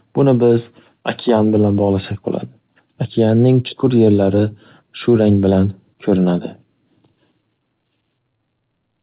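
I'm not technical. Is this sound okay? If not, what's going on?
No. Clock drift between sender and receiver affects the whole clip. The sending device's clock runs roughly 4 percent faster than the receiving one, so speech arrives a little quicker than it can be played, and the receiver's holding buffer keeps overfilling.

Repeated timing corrections run from 0.06 to 8.87 s. To keep up, the receiver keeps trimming tiny slices out of the speech. It therefore plays at about 104 percent speed, with small, unevenly spaced hiccups.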